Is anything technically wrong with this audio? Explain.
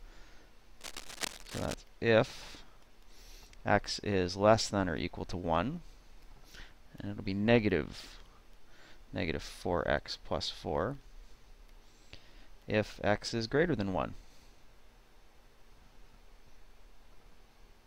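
Yes. From 0.81 to 1.74 s there is cable scratch noise: dense, uneven bursts of scratching and rustling sit over the sound, roughly 10 dB below it. This is likely a worn cable, connector or control being moved, its contact resistance fluctuating rapidly. Unlike isolated clicks or steady hiss, the noise comes in clustered, irregular bursts.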